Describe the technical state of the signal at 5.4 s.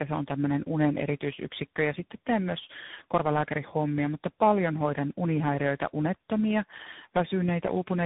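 At 5.4 s, as throughout, tandem speech coding: GSM full rate, AMR-NB and CVSD each re-encoded the previous codec's output, so the speech is rough, warbly and muffled, with nothing above 3.8 kHz.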